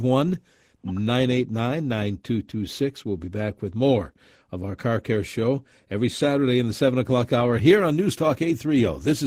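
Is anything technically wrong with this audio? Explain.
Yes. Opus voice compression runs through the whole speech clip. The lower band is coded by linear prediction, with a transform layer above 8 kHz. The prediction residual is quantised coarsely, and the upper layer gets only a few bits, which fits a low bitrate around 16 kbps. The voice comes out plainly hoarse and slightly robotic.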